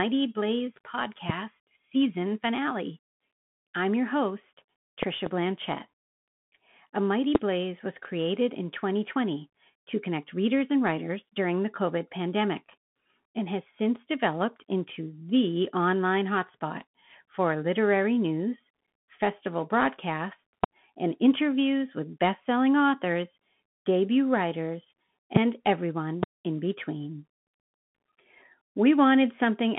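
Right from the start the whole clip runs through a Bluetooth CVSD headset codec. The speech sits in a narrow phone-style band of roughly 150 Hz to 3.4 kHz, with nothing above 3.8 kHz. The coding damage is plainly audible: a granular hiss under the speech, and s sounds that come out scratchy. It happens because the one-bit up/down encoding can't keep up with fast, bright sounds, which fits a 64 kbps CVSD link.

On top of that come loud pops, each roughly 20 to 25 dB above the speech. The first lands at 1.30–1.32 s. There's a double pop across 5.03–5.29 s, then single ones at 7.35–7.38 s, 20.64–20.66 s, 25.36–25.39 s and 26.23–26.25 s. The speech carries on underneath each one. They sound like sharp electrical transients, likely a connection, switching or driver glitch putting a spike into the signal.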